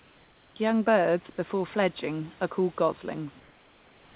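From 1.30 to 1.38 s, just before "fledging are called", the room background turns into a smooth, featureless hiss about 1 dB quieter, then the real background returns as speech resumes. From 3.40 s to the end it happens again, about 2 dB down. This is comfort noise in place of the background, likely from discontinuous transmission. The sender went silent during the pause and the receiver synthesised generic noise, roughly matched to a background sitting about 32 dB below the loudest speech, within a narrowband path with nothing above 4 kHz.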